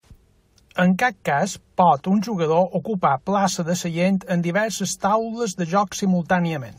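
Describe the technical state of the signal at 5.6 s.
At 5.6 s the speech signal is intact, with no dropout, clipping, glitch or other fault present.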